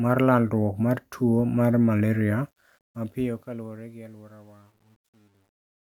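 A speech clip that fades out from around 2.4 s, with truncation distortion on the fade from 2.40 s to the end. The stage keeps about 10 bits and adds no dither, so grit thickens as level drops, and is at its worst from 3.73 s. Unlike steady noise or codec artefacts, it worsens only as the fade deepens.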